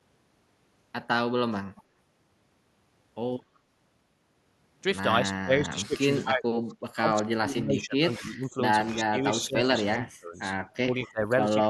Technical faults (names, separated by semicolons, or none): echo leak; speech suppressed in double talk